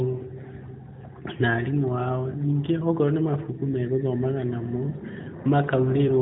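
No faults are audible, the speech simply carrying the band limit of an AMR narrowband mobile codec path with nothing above 3.8 kHz.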